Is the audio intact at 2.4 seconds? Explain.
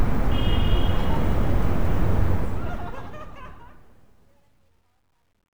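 No. From 2.24 s to the end at 5.6 s, the fade-out carries truncation distortion. The fade keeps too few bits without dither, roughly 11-bit resolution, so it turns gritty, worst from 3.65 s. A waveform shows stair-stepped blocks, and a spectrogram shows broadband fuzz.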